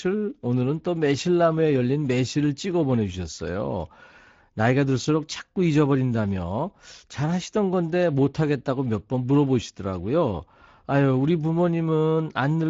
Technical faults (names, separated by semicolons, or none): Speex codec